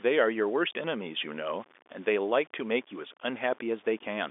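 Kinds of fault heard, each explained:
Low bit depth without dither: The speech was likely cut down to very few levels by plain truncation with no dither added, a coarseness that fits roughly 7 bits. Because the rounding error tracks the waveform, it sits around 30 dB below the speech as a grainy, rasping distortion that shifts with each syllable, and it grows harsher as the voice gets quieter, throughout the clip and well above the faint noise the telephone line itself carries.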